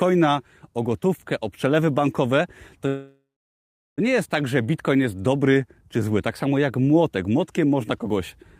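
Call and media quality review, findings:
Call audio freeze, 2.87–4.00 s, speech. Last sound smeared into a fading buzz, then about 0.74 s of silence; speech resumes intact, delayed 1.1 s, nothing lost. Likely jitter-buffer underrun from held packets. Spectrogram: frozen harmonic smear decaying to a blank band. Waveform: flat gap.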